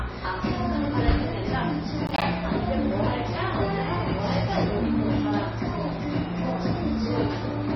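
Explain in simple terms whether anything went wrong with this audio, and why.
Across the whole recording the sound is dull and muffled, with a watery, swirling quality and smeared edges on sudden sounds. Nothing can be heard above about 5.9 kHz. The likely cause is heavy MP3 compression. To make the file small, the encoder threw away all the treble above that point and kept only the parts it judged most audible. Quieter details that flicker in and out between moments produce the swirly texture.

From 2.07 to 2.22 s a short burst of gritty crackle tears through the sound. This is processor overload crackle. The computer handling the audio fell behind and couldn't finish several tiny chunks of sound in time, one after another. Each chunk it missed came out as a brief hole of silence with hard edges. The spacing of the clicks fits chunks of roughly ten milliseconds, around seven dropped over that stretch, heard together as one rough crackle.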